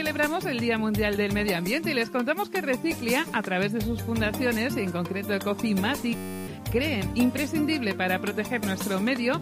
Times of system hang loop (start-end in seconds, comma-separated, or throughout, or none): 6.15-6.47